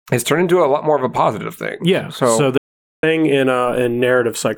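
From 2.58 to 3.03 s, an audio dropout to silence, likely lost input, leaves dead digital silence, lacking the room tone a real pause keeps.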